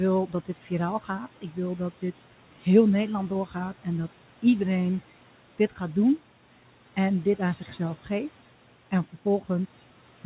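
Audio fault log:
0.27–0.71 s, 1.41–1.57 s (just before "dat dit heel") and 8.91–9.22 s, speech cut by the noise suppressor: quiet speech mistaken for noise and turned down by about 10 dB (about 7 dB last), sounding swallowed and faint.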